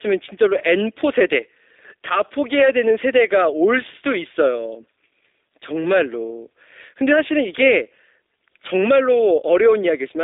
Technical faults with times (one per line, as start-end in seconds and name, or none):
0.00-10.23 G.729 codec